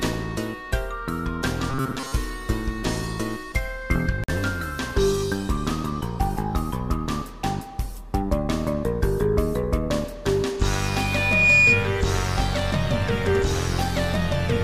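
From 1.70 to 2.14 s the sound turns into a rigid metallic buzz at 133 Hz: robotic sound from repeated short buffers, likely a starved stream repeating roughly 7.5 ms chunks, unlike a one-off glitch. At 4.24 to 4.30 s a corrupt frame decoded gives a brief glitch lasting only a couple of frames, too short to be feedback. From 10.70 to 11.95 s a loudspeaker feedback squeal at 2.4 kHz swells over most of a second to about 10 dB above the sound, a single growing tone rather than a buzz.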